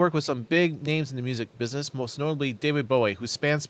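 From 1.52 to 1.58 s, a very faint copy of the speech returns 290 ms late, likely echo leak, showing as a weak, delayed repeated trace on a spectrogram.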